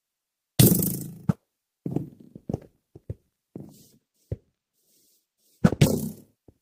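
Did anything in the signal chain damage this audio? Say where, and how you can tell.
Yes. From 3.65 to 5.98 s, a channel delay (comb filtering) at the mono downmix leaves one side about two samples late, notching out treble near 10 kHz.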